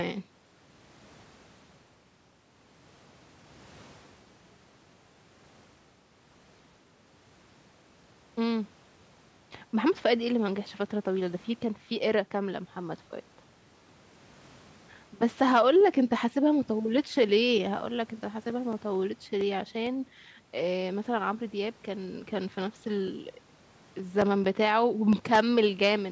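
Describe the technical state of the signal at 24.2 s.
CD scratch ticks, 22.39 to 25.35 s: a blemish defeats error correction each disc turn, leaving concealed samples heard as brief ticks, about five per second.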